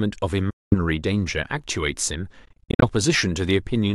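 Speech cuts out from 0.50 to 0.75 s, and again in scattered gaps from 2.45 to 2.87 s (longest about 46 ms), likely a Bluetooth dropout. Late packets were discarded, so the waveform shows flat holes and the spectrogram blank vertical bands before speech resumes further along.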